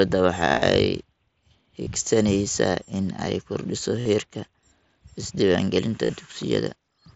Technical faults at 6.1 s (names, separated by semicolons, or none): concealed Bluetooth headset packet loss